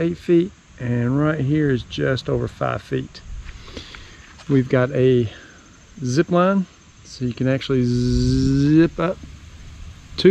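No technical faults can be heard anywhere in the clip.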